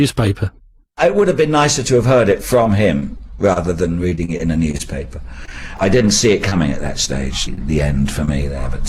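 From 2.63 to 4.81 s there is repeated packet loss with a robotic sound: holes of up to 24 ms arrive in quick succession, each patched by stretching the previous sound, so about 200 ms goes missing. Because the patches come back to back, the texture turns choppy rather than merely ticking.

Between 5.45 and 7.59 s come scattered short gaps, roughly ten small holes of about 20 ms at most, spaced apart and concealed by continuing what came before. Unlike the earlier stretch, the sound stays clear, broken only by isolated ticks, smears and hiccups.

At 8.25 s a short concealed packet loss of 20 ms leaves a single hole that the receiver fills by extending the last sound, then blends back. It is a lone brief smear or wobble, not part of any cluster.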